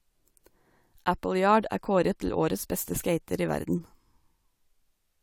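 Nothing stood out as a technical fault anywhere in this speech recording on listening.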